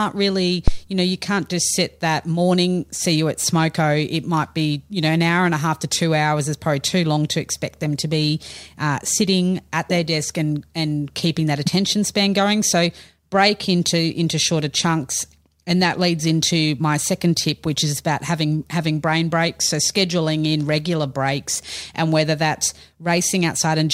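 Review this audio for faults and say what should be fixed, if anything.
A phantom power thump sounds from 0.68 to 0.82 s in this speech clip. A supply switched on or off on a live input sends a voltage step through the coupling capacitors. The result is a deep thump that hit full scale at the input and decayed within about 32 ms. Unlike a plosive pop or a handling bump, it is a single clean low-frequency step, unconnected to the speech and without rustle. To prevent it, mute or pull down the channel before switching phantom power, and unmute only after the supply has settled.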